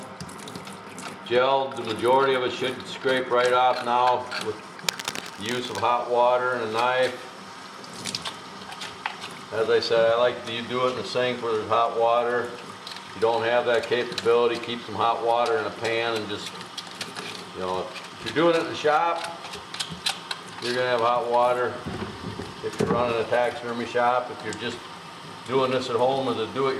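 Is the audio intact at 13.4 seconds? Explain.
Yes, at 13.4 seconds the audio is intact, with no dropout, click, distortion or other fault at that moment.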